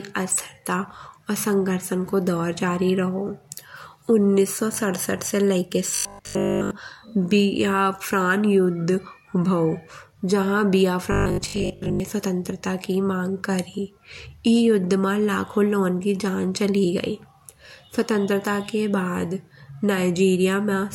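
Robotic sound from repeated short buffers at 5.95 to 6.71 s, then 11.12 to 12.00 s between "युद्ध भाओ जहां" and "स्वतंत्रता की मांग": the speech becomes a rigid 50 Hz metallic buzz. This is likely a 20 ms chunk replayed while fresh audio is skipped, almost entirely in the first stretch and mostly in the second.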